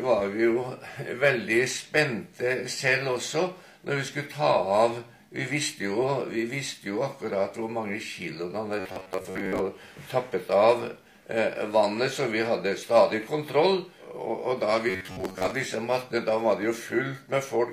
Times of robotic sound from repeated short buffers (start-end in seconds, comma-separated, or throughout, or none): 8.80-9.60, 14.90-15.51